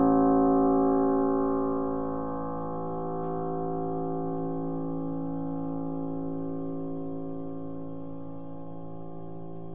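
No technical faults can be heard anywhere in the audio; the signal holds steady throughout, with no breaks, distortion or level problems.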